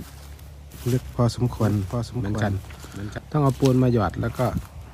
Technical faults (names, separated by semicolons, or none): doubled audio track